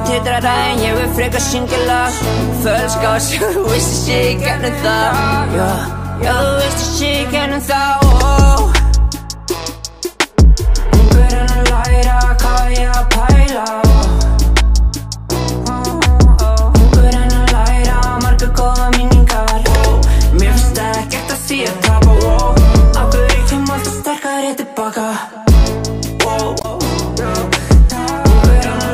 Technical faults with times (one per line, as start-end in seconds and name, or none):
26.58-26.65 damaged data in a compressed stream